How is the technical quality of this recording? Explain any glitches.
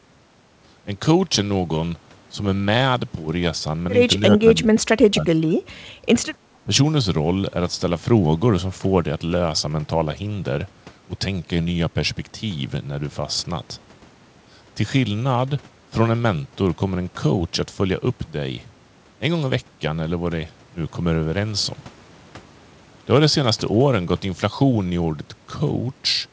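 The recording has three short echo-canceller glitches, all within about two seconds. The audio also shows no content above 8 kHz, which fits G.722 at 64 kbps over a call path.

Between 4.31 and 5.68 s, and again from 6.54 to 6.69 s, there is speech suppressed in double talk. The voice dips while audio played from the loudspeaker. The likely cause is the echo canceller mistaking the talker for loudspeaker echo and turning both down. In the first stretch the level drops by about 30 dB, for roughly a second in total. In the second it drops by about 15 dB, for about a tenth of a second. A waveform shows the envelope suddenly shrinking, and a spectrogram shows the speech bands fading or going dark in patches.

From 5.96 to 6.05 s the background is gated by the echo canceller. While the loudspeaker was active, the canceller pulled the microphone down by about 6 dB for roughly 100 ms, then released it. 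The room sound briefly sinks and then recovers. On a spectrogram this appears as a narrow vertical band of reduced noise floor. On a waveform it shows as a small, brief notch in the low-level background.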